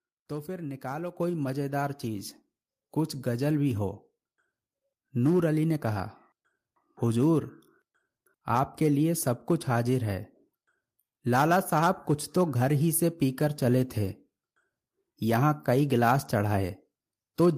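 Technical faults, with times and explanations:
1.17 s, microphone volume stepped up: the speech and the background noise behind it jump together by about 6 dB in a single step. The call software judged the microphone too quiet and raised the device's input gain at once, lifting everything the microphone captures.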